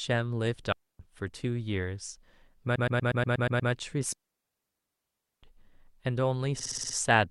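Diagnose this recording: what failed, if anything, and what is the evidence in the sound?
Clean holes of near silence at 0.72–0.99 s and 4.13–5.43 s, with no noise bursts: a digital wireless dropout, the receiver muting when the radio link lost data.

Stutters at 2.75–3.71 s (a 120 ms block replayed eight times) and 6.59–6.96 s (60 ms, six times): repeated frames in the codec stream, adding about 1.3 s.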